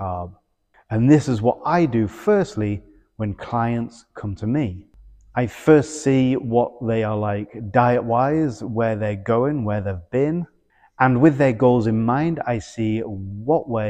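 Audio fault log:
0.22–13.62 s, clock slip clicks: faint regular ticks roughly every third of a second, around fifty in all, each a single sample dropped or repeated. The likely cause is two unsynced clocks drifting apart by something like 70 ppm.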